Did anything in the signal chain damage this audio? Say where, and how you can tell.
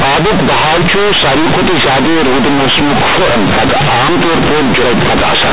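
Yes. At the sample-format conversion stage, A-law companded bytes were handed on as linear 8-bit samples without expansion, so companded audio was read as linear across the whole clip. Every sign change swings the output over roughly half its range, flattening loud and quiet alike into harsh, buzzy distortion with heavy noise filling the pauses, within the 4 kHz-limited G.711 telephone band.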